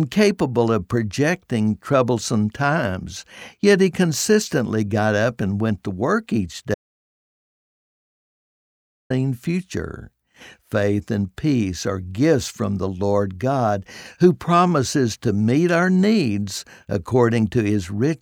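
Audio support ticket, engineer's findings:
Audio dropout to silence, 6.74–9.10 s: speech cuts after "went to work each", resumes at "future faith and peace". Gap is silent, no room tone, about 2.36 s lost. Likely input loss (device disconnect, link failure or mute) while encoder kept writing silence.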